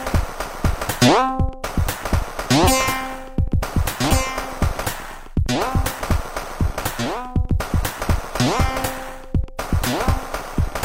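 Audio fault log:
Nothing stood out on listening to this audio.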